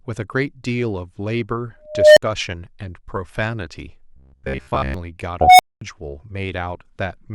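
At 1.86 s the speech is swamped by an unstable filter. A tone around 700 Hz swells over about 310 ms, clips, and then drops to about 60 ms of silence when the filter's values overflow and it resets. The same fault returns from 5.41 to 5.81 s, building faster, in about 180 ms, and leaving a longer gap of about 220 ms. The abrupt silence after each squeal is what separates this from acoustic feedback howl, which rings on rather than cutting out.

From 4.16 to 4.94 s the speech turns into a rigid, metallic buzz at 66.8 Hz that still roughly tracks the syllables. This is robotic sound from repeated short buffers. The likely cause is audio arriving too slowly, so each roughly 15 ms fragment is replayed while most of the real signal in that stretch is skipped. Unlike an unstable filter, nothing swells or falls silent. The buzz pitch stays fixed at one over the repeat length instead of following the speech's own intonation.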